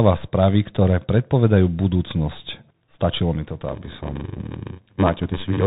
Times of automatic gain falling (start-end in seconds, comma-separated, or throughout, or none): none